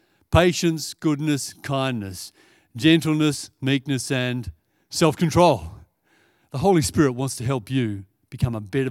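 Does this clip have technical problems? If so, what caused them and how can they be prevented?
No, there are no technical problems to prevent here.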